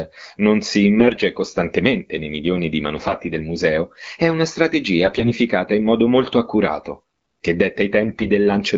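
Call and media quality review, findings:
AMR bit errors at 0.98–1.22 s, 2.95–3.22 s, 5.03–5.31 s and 8.02–8.30 s. Speech goes hoarse, scratchy and gargly; pitch and level hold. Weak link, about 4–7% bit errors, less protected bits flipped. Checksum passes, so misplaced pulses and wrong gain and spectrum values get decoded. AMR-WB (HD Voice) itself sounds clear, consistent with 12.65 kbit/s.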